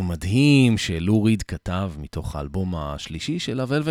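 No technical faults can be heard anywhere in this speech clip. There is nothing to place on a timeline, as no dropout, glitch or other disturbance occurs at any point.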